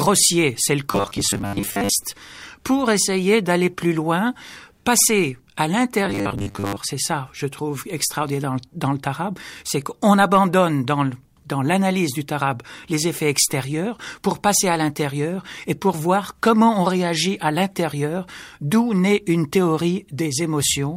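Speech carries two stretches of rigid, metallic buzz, from 0.91 to 1.89 s and again from 6.06 to 6.77 s, where the voice drones at a fixed 100 Hz while still roughly tracing the words. This is robotic sound from repeated short buffers, likely caused by new audio arriving too slowly, so the playback loops a 10 ms slice again and again. That repetition period sets the 100 Hz drone, and most of the real audio in those stretches, around two thirds or more, is skipped rather than heard. At 13.02 s there is a single sharp tick, a block of digital silence only 0.67 ms long, which fits a drop of about 32 samples. The signal cuts out and jumps back with no fade, so the two hard edges sit close enough together to register as one click rather than an audible hole, the sort of gap left when an output buffer is not filled in time.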